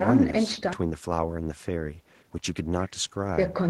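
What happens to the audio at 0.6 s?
Nothing goes wrong at 0.6 s; the speech carries on intact through that moment.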